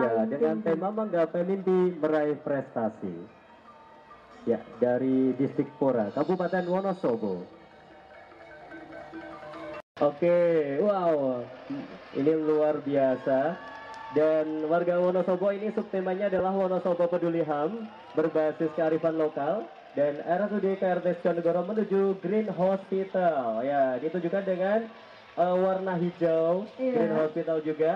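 Right at 16.39 s there's a brief case of lost LE Audio frames, a gap of about 10 ms, which fits a single dropped LC3 frame. With nothing arriving, the decoder papered over the hole by replaying the previous frame's spectrum with its signs scrambled, so that instant comes out as a tiny grainy smear rather than clean sound. It's too short to decay toward silence, so you hear a quick rough blip.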